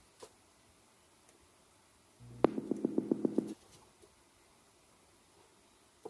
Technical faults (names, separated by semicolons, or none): none